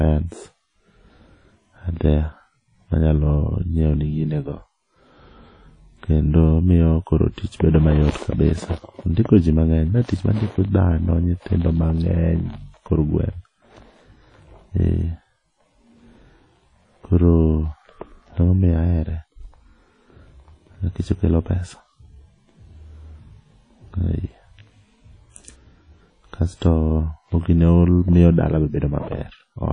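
From start to finish the speech carries plainly audible transform-codec damage, with nothing present above 10.1 kHz. Consonants and vowel onsets ring and smear, and a washy hiss rises and falls with the level of the speech. The likely cause is WMA compression at a low bitrate, the sound fitting roughly 32 kbps, where long transform blocks spread quantisation noise across tens of milliseconds and weak spectral lines are discarded.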